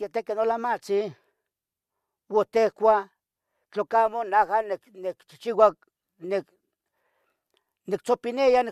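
No technical faults can be heard in this recording at any point.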